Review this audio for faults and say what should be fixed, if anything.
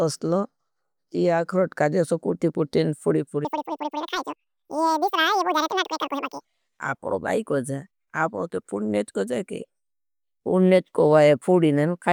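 From 3.45 s to 6.45 s, just after "जेसो कुटी कुटी पूड़ी" and before "आपनों काई को जाए", the audio was read two samples at a time (double speed): it runs 2x fast and 12 semitones higher, an octave up. The waveform looks compressed in time, and the spectrogram shows harmonics stretched upward. To prevent it, make the reader's channel count and sample width match the stream's actual format.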